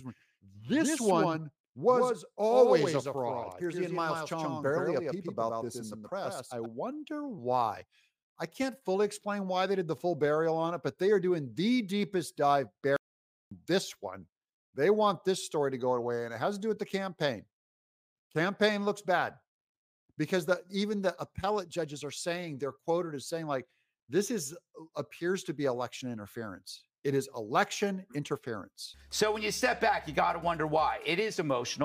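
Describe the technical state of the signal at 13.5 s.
At 13.5 s the playback stall is just ending: sound cuts to silence from 12.96 to 13.51 s, about 550 ms, likely from the player starving for data. Unlike a brief dropout or click, it's a long, clean gap.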